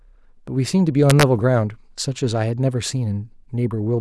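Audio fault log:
1.10–1.23 s, integer overflow: loud speech peaks here pass the largest value the sample format can hold, overdriven by about 0 dB, just at the limit. Instead of being held at the ceiling, each one wraps to the opposite extreme, producing harsh cracks far sharper than clipping.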